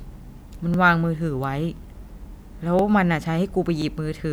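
At 0.74–0.77 s, 1.77–1.79 s, 2.79–2.82 s and 3.82–3.84 s the speech shows overlapping chunks. The audio was handled in 1.0 s blocks, and each new block begins about 25 ms before the previous one ends, so that slice of sound is played twice at every join. The result is a brief stutter or click recurring at a steady one-second interval, with the doubled 25 ms fragment audible as a small hitch in the flow.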